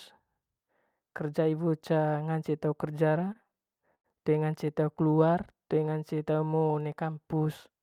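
From 3.21 to 4.06 s the speech stutters with repeated stalls. Packets arrived later or more slowly than playback consumed them, so the jitter buffer kept running dry. Thirteen times in that span the receiver stretched the last sound to cover the wait, with the longest hold about 95 ms. These fills total about 220 ms, roughly a quarter of the passage. Packet loss would leave holes, but here nothing is dropped; the speech simply drags and judders before carrying on intact.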